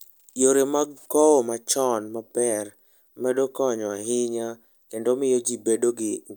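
No technical faults can be heard anywhere in the recording; the speech signal stays continuous and steady throughout.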